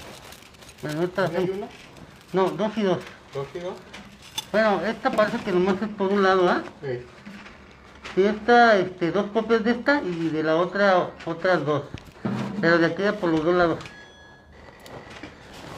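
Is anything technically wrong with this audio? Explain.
Yes. Periodic clock jitter runs through the whole clip. Something is shaking the converter's sampling clock at a steady rate of around 3 kHz. Each sample is taken slightly early or late in a repeating pattern. That timing wobble adds copies of every frequency component, offset above and below by about 3 kHz. Higher-frequency content picks up stronger sidebands. The result is a rough, metallic edge on the sound that disappears whenever the audio falls silent.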